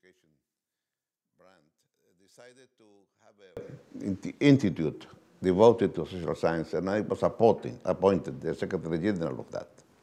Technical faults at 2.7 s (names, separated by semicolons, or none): one channel inverted